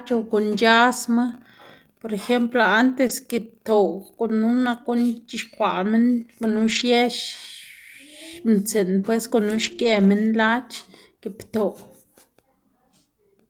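At about 3.07 s there's a short concealed packet loss: roughly 20 ms never arrived in time, so the decoder stretched the preceding sound to cover it and blended back in. You hear it as a quick smear or wobble. Right at the end of that, around 3.09 to 3.11 s, a lost packet rebuilt from error correction follows: a low-bitrate backup copy from the next packet was played, so there's no gap, just a rough, noisier 20 ms. The same thing recurs in bigger patches: between 6.43 and 6.81 s, about 200 ms of audio comes from those backup copies, and between 9.51 and 10.09 s another 300 ms does. Those stretches sound grainy and hissy rather than dropping out.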